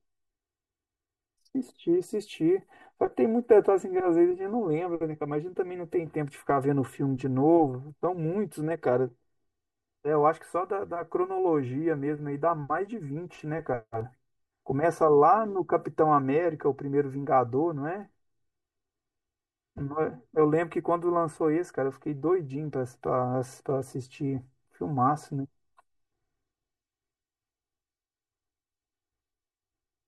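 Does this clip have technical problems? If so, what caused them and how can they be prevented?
Yes. The speech has channel delay (comb filtering) from start to finish. One channel lands roughly 3 ms behind the other, and when the two are summed to mono the shared sound cancels at evenly spaced frequencies, beginning around 200 Hz. That leaves it hollow and phasey the whole way through. To prevent it, time-align the channels, or use just one of them, before folding down to mono.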